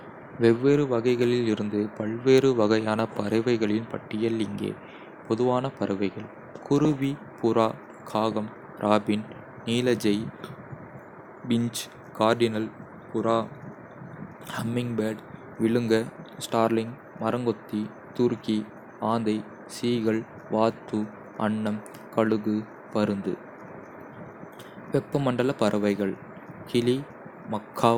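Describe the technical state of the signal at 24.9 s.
At 24.9 s the speech signal is intact, with no audible fault at that moment.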